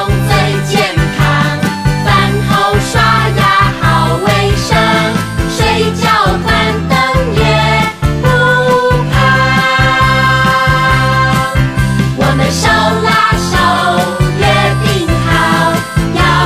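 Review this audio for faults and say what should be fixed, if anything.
At 2.19 s the sound jumps ahead by a few milliseconds. This is likely a dropped buffer (overrun). Unread samples were overwritten. Give the capture thread higher priority or use larger buffers.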